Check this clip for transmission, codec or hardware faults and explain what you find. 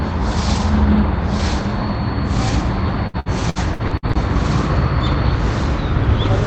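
One transmission fault appears, heard through a call codec path whose top end stops near 8 kHz. Repeated packet loss (robotic sound) runs from 3.07 to 4.15 s: six gaps, the longest 62 ms, are patched by extending prior sound. About 28% of the span is concealed, giving choppy sound. Unlike a single dropout, the holes recur in quick succession.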